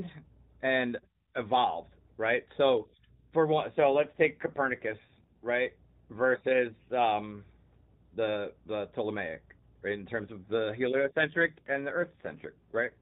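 An AMR rate drop occurs twice, from 3.70 to 5.46 s and again from 10.90 s to the end. Each time the link appears to have weakened, so the narrowband mobile codec spends fewer bits on the speech and more on error protection. The sound suggests a step down from 12.2 to about 5.9 kbps. The band stays the same and nothing drops out, but the speech turns rougher, buzzier and more synthetic, then clears when the rate recovers after the first drop.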